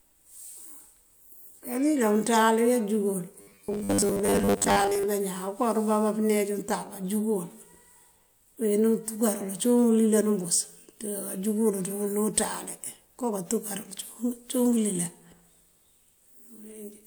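Robotic sound from repeated short buffers runs from 3.41 to 5.05 s. The voice turns into a rigid, metallic buzz at 100 Hz that still loosely tracks the speech. This is likely from a 10 ms fragment being replayed while most of the real audio went missing.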